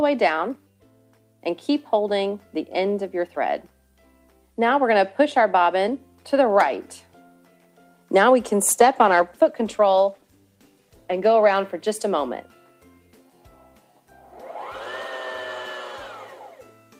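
A call bitrate drop runs from 8.71 to 11.61 s. The sound turns rougher and more muffled and stays degraded for about 2.8 s, which fits the encoder being throttled from roughly 40 to 17 kbps. A spectrogram would show the upper band thinning and then returning.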